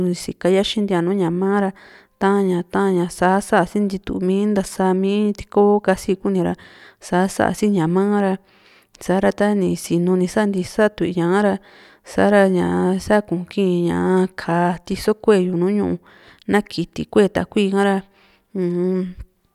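Nothing in the speech stood out as a technical problem on listening.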